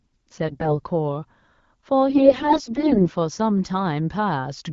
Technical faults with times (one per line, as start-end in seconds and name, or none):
0.48-0.80 AMR bit errors
2.10-3.11 AMR bit errors